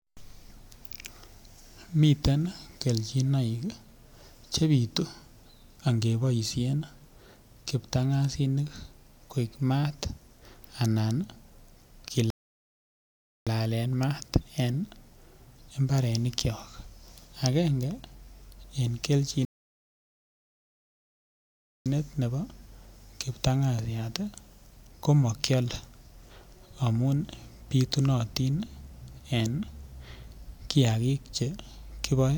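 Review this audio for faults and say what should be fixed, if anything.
Two rebuffering stalls, 12.30–13.47 s (about 1.2 s) before "maat en" and 19.45–21.86 s (about 2.4 s) before "ne bo". Playback starved and paused; unlike a dropout, speech resumes exactly where it stopped, nothing skipped. A larger playback buffer or adaptive bitrate switching would prevent these stalls.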